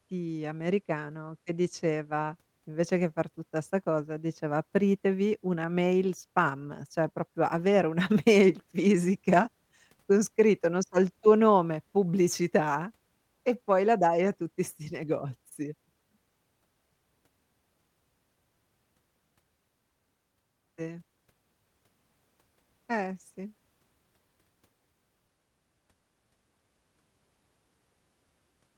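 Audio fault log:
Nothing to log here: the speech comes across with no faults to point to anywhere in the recording.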